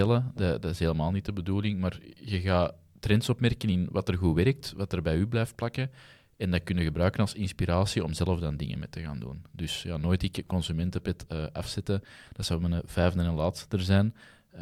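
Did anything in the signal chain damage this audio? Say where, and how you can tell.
No, nothing damaged this audio.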